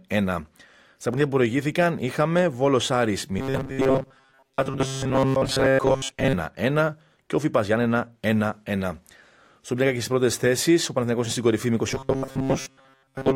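Audio likely arrived too seldom, so playback kept repeating a short buffer of about 7.5 ms for most of the time, skipping real audio. From 3.39 to 6.33 s, and again from 11.88 s after "κορυφή με" to the end, this causes robotic sound from repeated short buffers, a rigid metallic 134 Hz buzz loosely tracking the speech.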